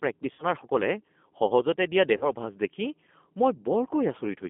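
Throughout, the speech carries G.729 codec damage. The line runs from about 200 Hz to 3.5 kHz. The voice is rebuilt at 8 kbit/s from a filter, a pitch predictor and a few pulses. It sounds plainly rough and synthetic.

From 0.33 to 0.45 s, VoIP packet loss is concealed by the speech codec. About 60 ms went missing, which fits three lost packets. The decoder stretches the last sound into a fading buzz or coloured noise. The voice stays weak as it recovers.

From 2.17 to 2.30 s, the same concealment returns. Here about 40 ms is lost, consistent with two packets. Again a buzzy, decaying tone or coloured noise fills the gap, and the speech comes back thin for a moment.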